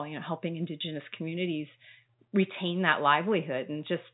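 Nothing goes wrong in this bit of speech: the call microphone processing trims the lowest bass, and the G.711 telephone coding keeps everything below about 3.9 kHz, just as that phone line would.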